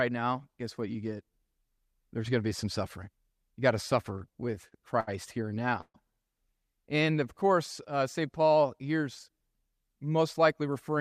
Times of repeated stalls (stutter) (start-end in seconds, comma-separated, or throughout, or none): 4.13-5.09, 5.55-5.96